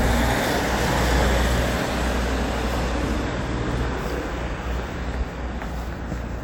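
No technical faults can be heard anywhere in this recording of everyday sounds. Nothing in the audio points to a problem in how it was captured, processed or played back.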